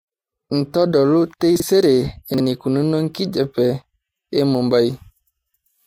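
At 1.56 to 1.62 s and again at 2.34 to 2.40 s, the speech has chunks out of order: a 20 ms chunk plays two chunks late, after audio that should follow it. Nothing drops out, but each spot sounds briefly jumbled, with three hard joins.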